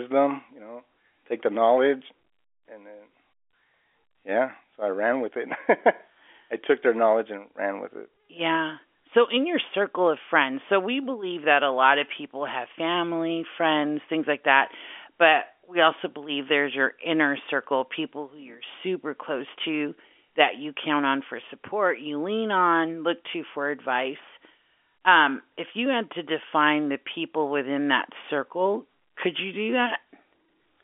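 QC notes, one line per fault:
Nothing stood out on listening, with the speech sitting in the narrow band of an ordinary G.711 telephone line and nothing heard above about 3.6 kHz.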